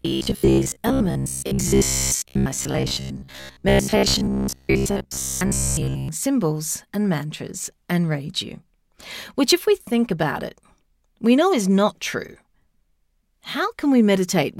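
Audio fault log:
0.02–6.09 s: robotic sound from repeated short buffers. A rigid, metallic 66.7 Hz buzz only loosely follows the speech, likely because audio arrived too seldom and a short fragment of about 15 ms was replayed for most of the stretch, skipping real audio.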